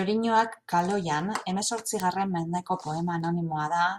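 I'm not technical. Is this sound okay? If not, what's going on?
No, there's a problem. From about 0.39 s to 3.61 s there's a run of sharp ticks, roughly one every 0.4 seconds, about ten in all, sitting on top of the speech. These are word clock ticks. The audio passed between two pieces of digital gear that weren't keeping time together, with their clocks off by a tiny amount, around fifty parts per million. Each time they drifted a full sample apart, one sample got dropped or doubled, and that slip is the tick you hear.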